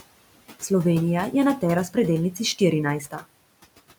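From the start of the clip to its end, a noise suppressor is working frame by frame, cutting each band it judges to be steady noise by about 18 dB. The room noise, which sits about 18 dB below the speech, therefore does not hold a constant level. It drops away in the pauses between words and comes back up underneath them whenever speech is present, so the background pumps in step with the talking.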